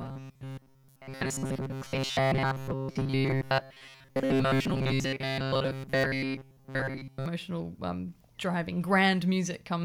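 From 0.01 to 7.26 s, ending before "um driving", the speech has a robotic sound from repeated short buffers, likely from late audio being replaced by a repeated 7.5 ms chunk. It buzzes metallically at 134 Hz. A spectrogram shows harmonic lines every 134 Hz, and the waveform shows repeating cycles.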